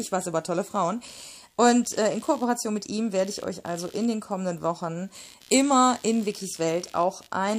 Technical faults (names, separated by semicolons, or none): computer activity noise